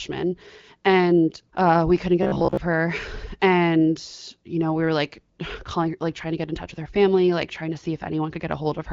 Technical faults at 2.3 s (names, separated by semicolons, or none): robotic sound from repeated short buffers